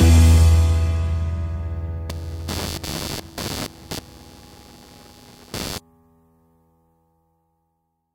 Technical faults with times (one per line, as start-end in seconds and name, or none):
2.09-5.78 computer activity noise